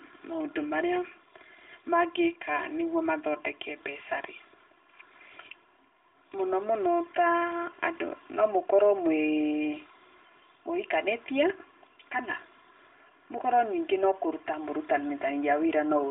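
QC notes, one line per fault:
Throughout, channel delay (comb filtering): one channel trails the other by roughly 3 ms, so the mono sum cancels at evenly spaced frequencies from around 150 Hz up, sounding hollow and phasey. A spectrogram shows fixed horizontal dark notch bands across the phone-limited band.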